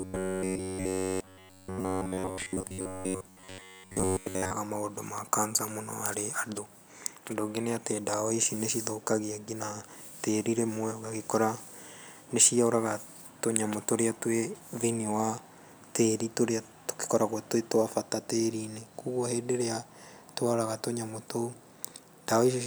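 From 0.01 to 4.53 s, new audio likely arrived too seldom, so a snippet of about 10.7 ms was replayed continuously in its place. This robotic sound from repeated short buffers clamps the voice to a rigid, metallic 93.8 Hz buzz that only loosely follows the words.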